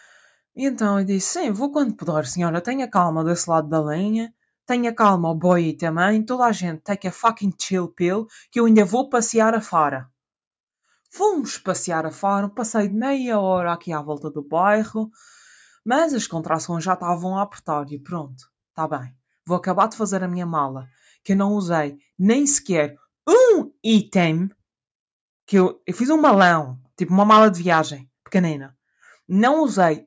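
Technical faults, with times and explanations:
No faults in this speech: the call microphone processing trims the lowest bass as intended, and nothing reaches above 8 kHz.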